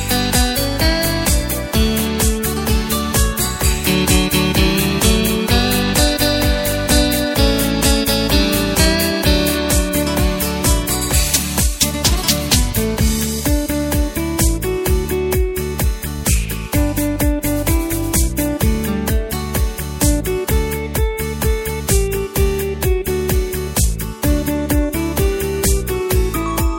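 No technical faults can be heard anywhere in this audio. Nothing in its playback calls for comment at any point.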